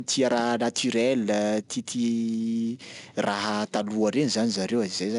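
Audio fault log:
Throughout, 4-bit ADPCM compression: each sample is coded as a coarse 4-bit step from a predicted value, with the step size adapting as the signal changes. The resulting error is a broadband grit that rises and falls with the speech, plainly audible as a rough hiss on louder syllables. Nothing is present above 10.6 kHz, which fits a reduced sample rate. Together these point to a data rate of around 89 kbps.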